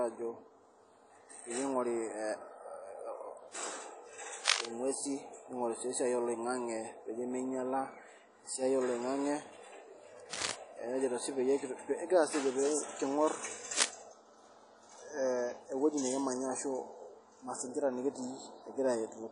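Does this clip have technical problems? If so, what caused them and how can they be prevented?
Yes. Throughout the speech there is ringing, washy smearing and a hiss that swells and falls with the voice, and nothing survives above 10.1 kHz. This is likely WMA compression: a transform codec with long blocks spreads its quantisation error over tens of milliseconds and zeroes weak spectral lines, which fits a low bitrate around 32 kbps. Unlike steady broadband noise, this hiss tracks the signal. Encode at a higher bitrate or use a more modern codec.

Three bursts of dense, uneven scratching sit over the speech at 4.45 to 4.68 s (just before "ing'uesi ning'ori sii esiai"), 10.31 to 10.52 s and 13.73 to 13.90 s. The first and last are roughly 5 dB above the speech, and the middle one is about level with it. This is likely cable scratch noise: a worn cable, connector or control carrying DC is moved, and its contact resistance jumps rapidly. 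Unlike isolated clicks or dropouts, each burst is a rustling cluster lasting about 0.2 s. Replace or clean worn cables and controls, and keep them still while recording.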